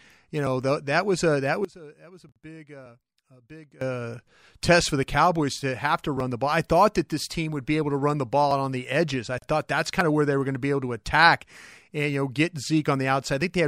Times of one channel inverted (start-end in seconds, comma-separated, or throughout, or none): 1.65-3.81